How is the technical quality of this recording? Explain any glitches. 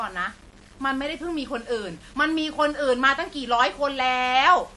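The recording has two faults, and both run through the whole of the speech: a grainy quantisation texture and plainly audible low-bitrate coding damage.

Low bit depth without dither is heard from start to finish as gritty distortion that rises and falls with the speech, sitting at roughly 30 dB below it. Rounding each sample to a coarse step, which fits an 8-bit signal, leaves an error tied to the waveform itself. That error makes quiet syllables and decaying tails crackly rather than softly hissy. This is what separates it from ordinary background noise or dithered hiss. That kind of noise stays steady underneath the speech, while this grain follows it and thins out when the speech stops.

MP3 compression is the likely cause of the second fault, and it is also present throughout. Nothing reaches above 11.4 kHz, so the top of the speech sounds dulled. The damage is plainly audible as a watery, swirling quality with smeared consonant onsets. 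Starved of bits, which fits an encode around 48 kbps, the encoder drops weak frequency lines and they flicker in and out from frame to frame. That flicker is the tell against a simple low-pass filter. A filter would only dull the sound, without the warbling artefacts.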